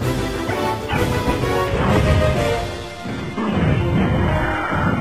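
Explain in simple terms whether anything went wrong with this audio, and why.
Something did go wrong. From about 1.69 s to the end, the sound suddenly gets duller and fuzzier, with nothing above roughly 12.3 kHz. That's an adaptive stream at a lower bitrate: the connection likely slowed, so playback switched to a cheaper version without a gap.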